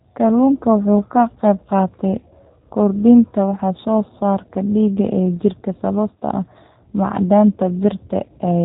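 Speech runs through G.729 coding for its whole length, and the damage is plainly audible. Nothing above 4 kHz survives, so the sound is dull and boxed. Each 10 ms frame is rebuilt from a filter, a pitch predictor and a few pulses. That makes it rough and synthetic, consistent with an 8 kbit/s stream.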